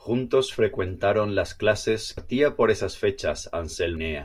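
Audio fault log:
2.18 s and 3.97 s: damaged data in a compressed stream. Two brief blips break the speech, the first just after "frecuentaron las clases". Corrupted bytes make the decoder misread frames, lose sync and search for the next valid frame header.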